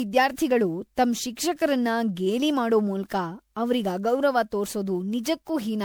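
Throughout, the speech sounds swirly, hollow and smeared, with blurred onsets: likely generation loss, with errors compounding over roughly ten re-encodes that point to 128 kbit/s MP3.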